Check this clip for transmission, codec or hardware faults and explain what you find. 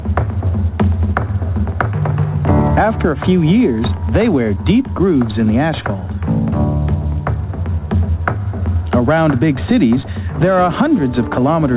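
Nothing stood out on listening, and the sound comes across as you would expect from a call that passed through a G.711 mu-law codec with no content above 4 kHz.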